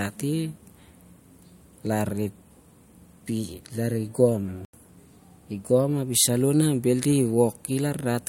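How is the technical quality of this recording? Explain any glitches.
The recording has one glitch: a short dropout just past the midpoint.

Corrupt frame muted, from 4.65 s to 4.74 s. For about 86 ms the speech vanishes into silence, cutting in abruptly rather than fading. A compressed frame arrived with damaged bits, the decoder rejected it, and the player filled the slot with silence instead of sound. The gap's length fits a single lost frame, and the speech resumes on schedule afterward, so timing is preserved.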